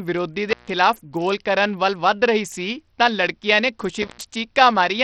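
Throughout the speech, the treble flickers and drops away under a gritty, aliased grain, likely Bluetooth SBC compression starved of bits, which fits a bitrate near 64 kbps. Intermittent contact first breaks the sound at 0.50–0.69 s, just before "ਗੋਲ ਕਰਨ". A loose connection opens for about 145 ms, leaving faint hiss between crackling edges. The same fault returns at 4.02–4.23 s, just after "ਸੀ ਤਾਂ ਲੜਕੀਆਂ ਨੇ", with a dropout of about 109 ms.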